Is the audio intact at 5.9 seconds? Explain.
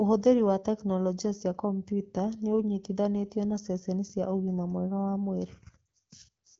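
No. At 5.87 s a single lost AMR speech frame, about 20 ms, produces a brief dip or warble. When a frame fails its checksum, the AMR wideband decoder, running at 12.65 kbit/s with speech otherwise clear, carries the last good pitch and vocal tract settings forward at reduced gain. That concealment sets it apart from a plain dropout: there is no hard gap to silence and no click, only a short softened smear before the sound resumes.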